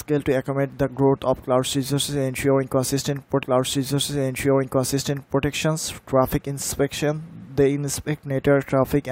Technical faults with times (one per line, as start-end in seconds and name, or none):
3.42-5.43 stream segment repeated